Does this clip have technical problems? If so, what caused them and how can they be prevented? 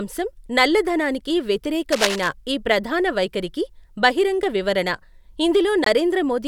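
Yes. From 1.92 to 2.29 s, dense, uneven scratching rustles over the speech at nearly its own loudness. This is likely cable scratch noise from a worn lead or connector being moved. Unlike steady hiss, it comes in ragged bursts. Replacing worn cables and keeping them still prevents it.

At 5.84 s the sound drops to silence for about 20 ms. This is a Bluetooth dropout, likely from a packet arriving too late, and its length fits a single lost packet. Unlike a click, it leaves a clean hole, and the speech resumes as if it had played on. Keeping the headphones close to the source with a clear path prevents it.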